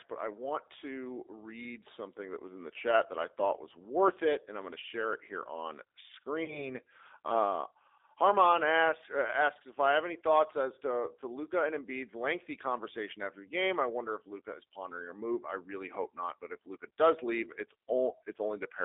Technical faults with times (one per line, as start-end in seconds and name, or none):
0.00-18.85 G.729 codec
6.44-6.72 VoIP packet loss concealed by the speech codec